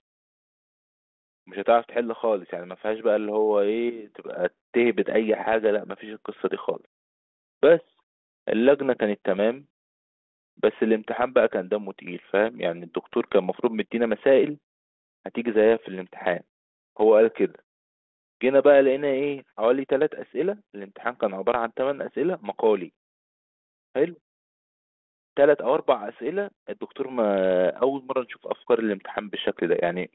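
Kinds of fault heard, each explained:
No faults heard.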